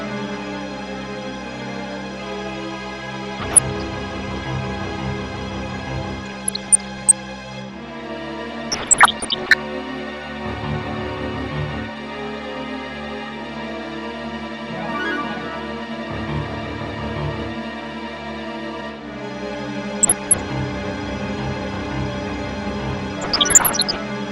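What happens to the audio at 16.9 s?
At 16.9 s you're hearing the same dull, gurgling graininess as the whole clip, likely MP2 compression starving its upper sub-bands, which fits something around 80 kbps.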